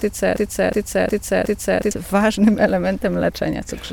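From 0.36 to 1.91 s, a broken-record loop replays a 0.36 s fragment four times, likely from a stalled stream. The spectrogram shows identical blocks tiled back to back.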